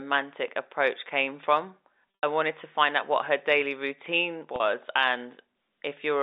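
Packet loss with pitch repetition at 2.16 to 2.23 s and 4.56 to 4.60 s: the receiver fills missing audio by replaying the last pitch period. The first gap, 80 ms at its longest, buzzes and fades; the 40 ms one sounds briefly held.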